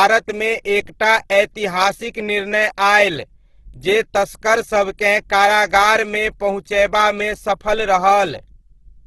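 Opus compression runs throughout the speech, from start to end. The sound turns grainy, rough and noisy. This likely comes from the codec's music mode, which keeps each band's energy but fills starved bands by folding lower content or with noise when bits run short. The damage is heavy, which fits a bitrate around 12 kbps, and nothing is heard above 12.3 kHz.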